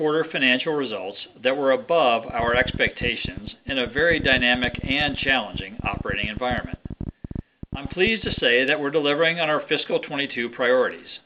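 Something, likely interference from nearby equipment or a faulty connection or power supply, injects a train of clicks from 2.30 to 8.39 s, about 14 a second at an uneven pace, roughly a hundred in all. The similar pulses tick and pop over the sound, peaking around 5 dB above it.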